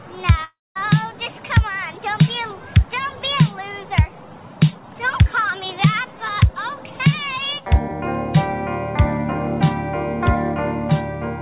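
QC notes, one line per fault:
0.44–0.77 s, long network dropout: the sound smears into a fading buzz, drops to silence for roughly 220 ms, then resumes with about 320 ms of material simply gone. This is likely lost packets concealed by the receiver, heard through the call path's 4 kHz band limit.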